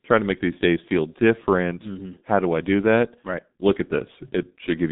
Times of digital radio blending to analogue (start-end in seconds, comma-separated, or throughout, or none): none